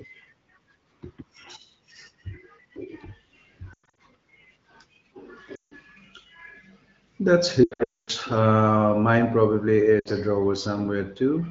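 Radio errors corrupted AMR speech frames so they failed their checksum, and the wideband decoder covered each gap by repeating the last good pitch and vocal tract settings at falling gain. These lost AMR speech frames fall at 3.73–3.98 s (scattered, longest run 0.1 s), 5.56–5.73 s, 7.64–8.11 s (longest run 0.24 s, fading quickly to silence) and 10.00–10.09 s. Each gap is heard as a brief warble that drops quickly toward silence, then returns weak or rough against the otherwise clear 15.85 kbit/s HD Voice coding.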